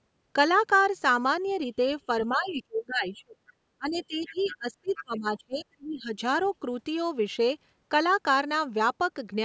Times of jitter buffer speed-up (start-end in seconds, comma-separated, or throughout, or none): none